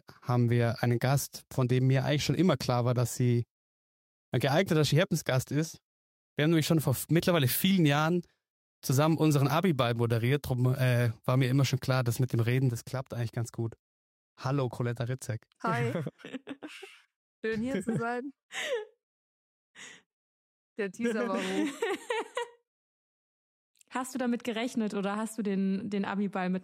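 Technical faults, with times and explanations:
12.70 s to the end: sudden gain jump. The level falls by about 6 dB in a single step and stays down for the rest of the clip, with the background noise dropping by exactly the same amount as the sound itself, so nothing about the source has changed. A cut of about 6 dB is what halving the sample values gives, likely a digital gain setting or a one-bit shift applied instantly rather than ramped in.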